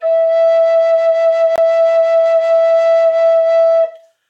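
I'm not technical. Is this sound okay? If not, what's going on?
No. At 1.56 to 1.58 s the music drops out for about 21 ms, a short hole. This is a block of digital silence: the playback program likely didn't supply the next chunk of sound in time, so zeros filled the gap.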